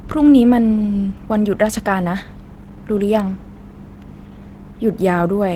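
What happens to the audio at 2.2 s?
At 2.2 s the speech carries Opus voice compression, present across the whole clip. At about 16 kbps in hybrid mode, the linear-prediction layer codes the excitation coarsely, with a thin layer for the upper band, leaving plainly audible hoarse, slightly robotic coding damage.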